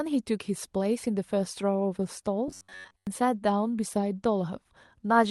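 Robotic sound from repeated short buffers runs from 2.48 to 3.07 s. For most of that stretch the speech collapses into a rigid, metallic buzz at about 93.8 Hz that only loosely tracks the syllables. The cause is likely audio arriving too seldom, with the playback side looping a slice of roughly 10.7 ms, one period of that buzz, while the real signal is skipped. The call codec's upper limit sits near 12 kHz throughout.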